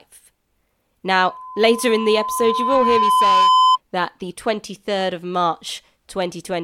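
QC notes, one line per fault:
1.08–3.78 s, loudspeaker feedback squeal: a steady 1 kHz tone swells over roughly two seconds to about 5 dB above the speech, then stops just before "that the". The microphone was re-amplifying its own loudspeaker, with loop gain above unity at that frequency.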